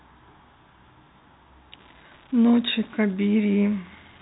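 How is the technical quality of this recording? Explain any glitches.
The quality is marked by one clear fault on top of a telephone-band sound, where the G.711 coding leaves nothing above about 3.8 kHz.

From 1.73 s through to the end, there's an unreliable data bit. One line in the digital path is marginal, so that bit flips in a random share of samples, and each flip throws in a spike of the same fixed size. You hear it as a steady crackle or fizz laid over the speech, and it carries right on through the pauses too.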